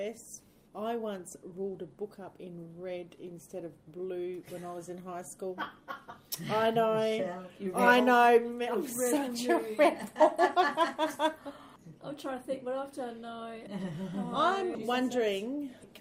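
No faults detected anywhere in the recording.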